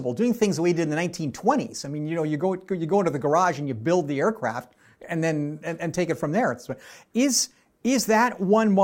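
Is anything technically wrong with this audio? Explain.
No, nothing technically wrong can be heard here.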